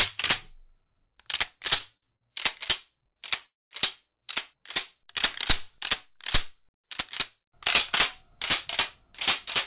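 At 1.97 to 2.04 s, 2.16 to 2.23 s and 3.13 to 3.18 s come short stalls from late packets. Each time the jitter buffer emptied and the last sound was held for 30 to 51 ms, then resumed with nothing missing. Each shows as a brief smeared, repeated band on the spectrogram with a slight dip in the waveform.

From 3.46 to 3.73 s a call audio freeze stretches the sound into a fading buzz that drops to about 210 ms of flat silence, visible as a blank column. Packets were likely held up in transit, and the sound resumes where it stopped. The band-limited call path shows nothing above 4 kHz throughout.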